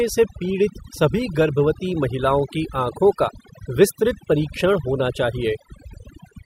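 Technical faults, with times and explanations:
Throughout: overdone noise removal. A noise reduction stage set far too aggressively treats any frequency band that dips close to its noise estimate as unwanted and pulls it almost to nothing, so the softer edges of the speech are cut away along with the noise. The gaps fall into near silence scattered with brief twinkling specks. On a spectrogram the background shows as dark voids dotted with isolated bright flecks, and the speech harmonics look ragged and patchy.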